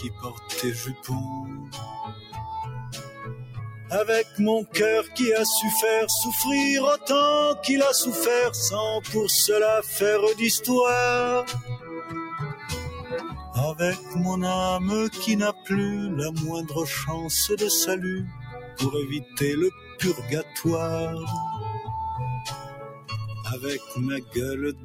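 A speech-tuned noise suppressor has been left running on music or general sound, and it keeps mistaking sustained material and tails for noise, so the level pumps and flutters with swings of around 15 dB while the sharp onsets slip through mostly intact. You can hear the sound cut by the noise suppressor at 0 to 5.16 s (down about 13 dB), 11.6 to 14.16 s (about 12 dB), briefly at 15.53 to 15.68 s (about 9 dB), 18.25 to 20.55 s (about 10 dB), and from 22.49 s to the end (about 15 dB), with held parts sinking and decays getting clipped short.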